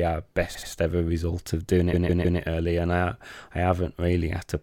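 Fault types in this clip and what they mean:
Repeated frames: a chunk of the coded speech plays again, so you hear a stutter. At 0.54 s a 78 ms slice comes round two extra times, adding about 157 ms. At 1.92 s a 157 ms slice repeats three more times, stretching things by 470 ms.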